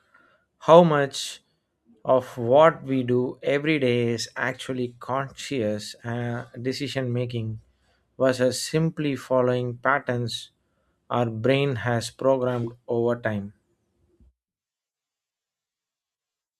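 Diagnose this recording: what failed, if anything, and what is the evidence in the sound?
Nothing failed; no fault is audible in this speech.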